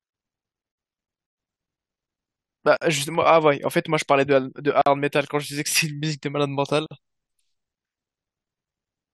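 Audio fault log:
0.73, 2.77, 4.82 and 6.86 s: gap at a join of encoded pieces. Speech drops out every 2.0 s, for 41 ms and then 48 ms. Separately encoded pieces were joined untrimmed, keeping start delay and end padding. Edges are smeared by the codec. Speech resumes unchanged.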